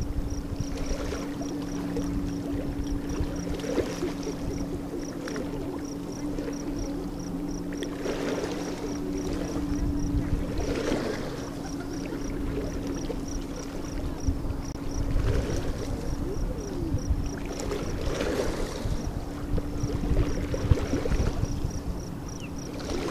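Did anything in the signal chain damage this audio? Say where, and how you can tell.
Yes, a corrupt frame was muted at the codec decoding stage. From 14.72 to 14.77 s the sound drops abruptly to pure silence for about 43 ms, which fits a single frame. Unlike packet-loss concealment, nothing fills the hole, and the timing stays intact afterward.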